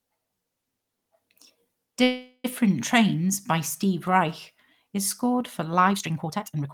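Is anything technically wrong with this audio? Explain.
Yes, there are two faults in this speech clip.

From 2.03 to 2.46 s the speech stops and the last sound is drawn out as a buzzy, hissing tone that fades away. It ends in about 50 ms of silence before the speech picks up exactly where it left off. Nothing is lost, but everything afterwards arrives about 0.41 s late. This is a call audio freeze, most likely from packets held up in transit so the jitter buffer ran dry and the receiver filled the gap.

From 5.87 s to the end of the clip the pace jumps abruptly to about 1.88 times normal speed while the pitch stays unchanged. The result sounds rushed. This is a time-stretched section, likely software squeezing that stretch of audio to fit a shorter length by discarding short fragments rather than resampling, which is why the pitch holds steady.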